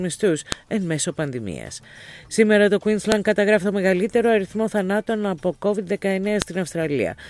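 Sharp, loud clicks land at 0.52 s, 3.12 s and 6.42 s. Each is a file header played as audio. Separate WAV pieces were joined with their headers left in. Those header bytes play as raw samples. Each new piece opens with a snap.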